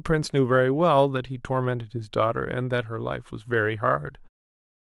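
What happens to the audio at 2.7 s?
At 2.7 s the speech carries sample clock jitter, which runs through the whole clip rather than starting there. The converter's timing wanders by a fraction of a microsecond, so each sample lands slightly off its ideal instant. The resulting error scales with how steeply the waveform is changing, sitting roughly 50 dB below the signal. It comes through as a faint hiss or grain riding on louder, brighter sounds and disappearing in pauses.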